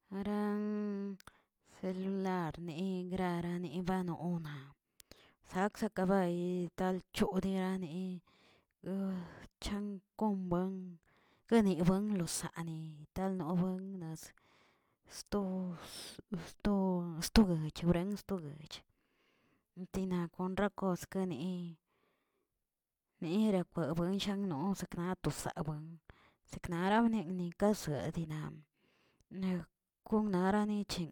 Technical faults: none

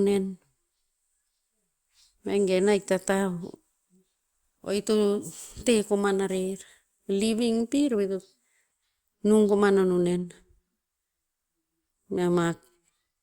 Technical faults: none

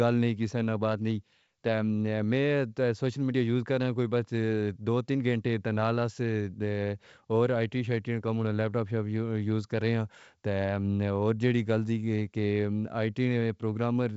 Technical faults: none

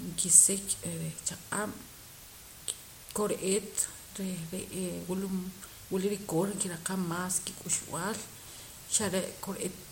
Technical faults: low bit depth with dither

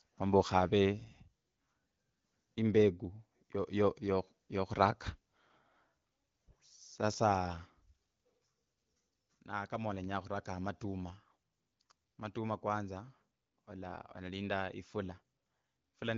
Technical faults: none

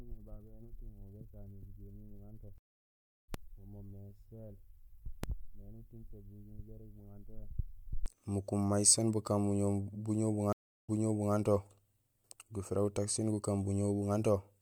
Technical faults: stream reconnect

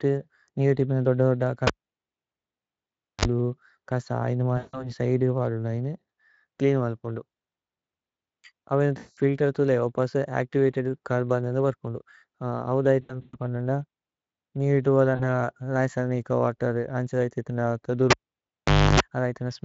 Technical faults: cable pulled and plugged in; VoIP packet loss concealed by the speech codec

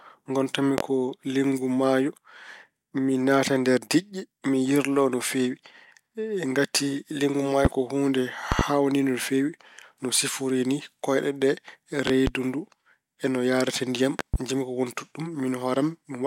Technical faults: loud pop

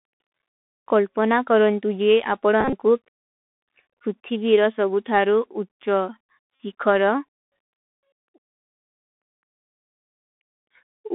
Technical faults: Bluetooth CVSD headset codec; Bluetooth headset packet repeated

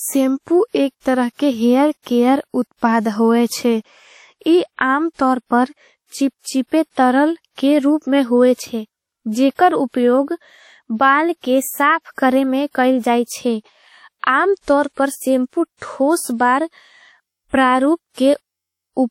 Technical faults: WMA compression

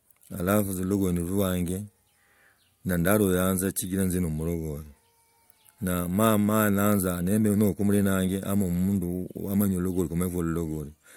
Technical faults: none

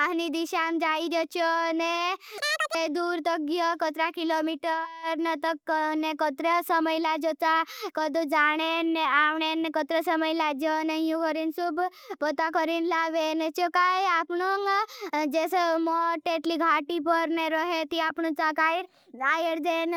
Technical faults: audio read two samples at a time (double speed)

